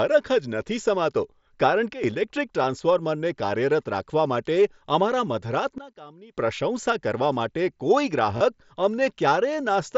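At 1.94 s the level drops abruptly by about 13 dB for roughly a tenth of a second, until 2.04 s. The background noise falls with the speech, and the change lands between two samples with no fade, which marks it as a sudden gain jump, likely a gain setting applied without a ramp. A fader move or compressor would glide instead. At 5.78 s the same thing happens more deeply, about 20 dB down, and holds until 6.37 s before snapping back.

At 2.62 s there is a brief concealed Bluetooth headset packet loss. About 15 ms of audio never arrived, which fits two lost packets, and the receiver filled the gap by repeating a matching slice of the preceding waveform. From 8.37 to 8.41 s a longer 30 ms gap, pointing to four packets, gives a short buzzy hold at full level with a small warble as real audio resumes. The level stays constant through it, which separates it from the gain jumps. The wideband mSBC link carrying the audio adds only light graininess.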